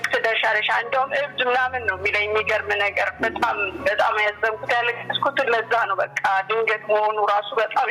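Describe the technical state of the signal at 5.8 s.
At 5.8 s you're hearing the gain pumping that runs through the whole clip: the level swings around 10 dB, loud and soft parts pulled closer in level and the sound squashed, likely from gain set too high feeding a fast limiter.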